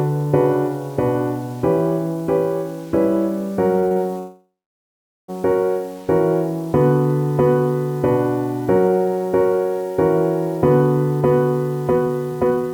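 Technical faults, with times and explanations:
Throughout, low bit depth without dither: the whole clip sounds grainy, with a rough hiss that rises and falls with the signal and is most obvious in quiet passages, where low-level detail turns gritty or sputters. The likely cause is truncation to about 7 bits with no dither, which leaves an error floor only about 30 dB below the signal. On a waveform the quiet stretches show visible staircase steps, and a spectrogram shows broadband noise that appears and vanishes with the sound.
3.79–3.98 s, repeated stalls (stutter): within about 0.19 s the audio catches four times, each hold lasting at most 32 ms and together adding about 107 ms of repeated sound, more than half the span, while nothing is lost. The playback buffer kept running dry as data arrived too slowly, and the receiver repeated the last fragment each time. The waveform shows short repeated cycles, and the spectrogram shows brief smeared blocks breaking up the normal pattern.
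4.18–5.30 s, call audio freeze: the sound stops moving forward for about 1.1 s. A short stretch of fading continuation comes first, then about 0.8 s of silence, and then the audio resumes from where it stopped, so a gap has been inserted and nothing is skipped. The likely cause is packets held up in transit, which emptied the jitter buffer and left playback about 1.1 s further behind. On a spectrogram a smeared tail fades into a blank band, and the waveform goes flat.
11.91–12.73 s, jitter buffer speed-up: the final 0.8 s runs at about 140% speed, noticeably hurried, while the pitch stays the same. To clear excess buffered delay the receiver cut out many tiny pitch-period-length pieces, roughly 0.3 s in total. On the waveform the periods are packed more tightly and events come sooner, while the spectrogram keeps the same frequencies, with the time structure compressed and small splice discontinuities.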